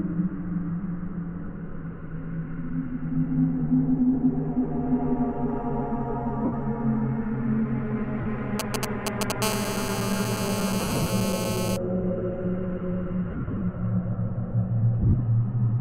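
At 6.45 s and again at 8.21 s, the sound briefly turns to a grainy, noisy smear lasting about 75 ms and 45 ms. These are lost LE Audio frames: the LC3 decoder filled each gap by repeating the last spectrum with scrambled phase.

From 8.60 to 9.32 s comes a galloping dit-dit-dit of short 217 Hz buzzes, roughly as loud as the sound itself. These are GSM signalling bursts from a nearby 2G phone, rectified by the audio circuitry.

From 9.42 to 11.77 s a hard, raspy 217 Hz buzz rich in harmonics runs steadily, about 5 dB below the sound. This is GSM phone buzz from a phone in a call pulsing its transmitter 217 times a second.

Within that buzz, from 10.80 to 11.10 s, more lost LE Audio frames appear, scattered over about 300 ms in short dropouts no longer than roughly 40 ms. They leave the sound smeared.

The same scattered frame loss returns from 13.31 to 13.61 s, with gaps of up to about 40 ms. 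It returns once more from 14.99 to 15.20 s, where the gaps are shorter, around 20 ms at most. Each time the sound turns briefly noisy and broken as the decoder patches over the missing frames.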